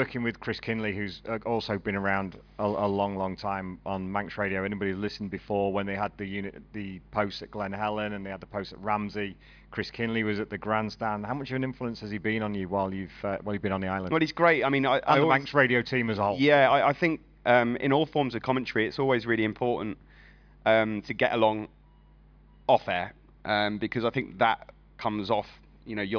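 Nothing in the audio stood out as a technical problem on listening.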